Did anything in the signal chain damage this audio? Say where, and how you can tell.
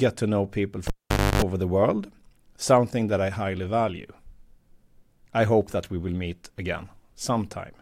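Yes, in the analogue wiring: a live cable pulled and plugged in. After "to know people", a pop at 0.87 s drops to near silence for 0.5 s. Within that gap, about 0.29 s of 50 Hz mains buzz sounds while only the plug tip touches, then a pop at 1.42 s restores "the world something that".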